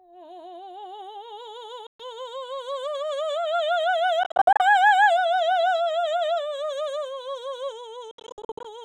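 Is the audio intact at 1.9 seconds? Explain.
No, a Bluetooth dropout cuts the music from 1.87 to 2.01 s. The sound stops, leaving a gap of silence roughly 0.15 s long. When it returns, the music has moved on as though it kept playing through the hole, so the missing stretch is simply gone. This is likely caused by wireless audio packets arriving at the headphones too late to be played and being discarded, so the output stays empty until usable data comes through again.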